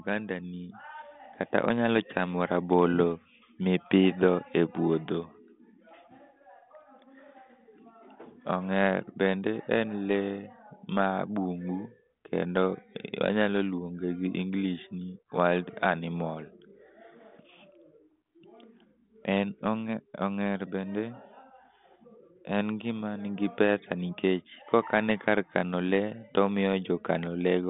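No technical faults are present.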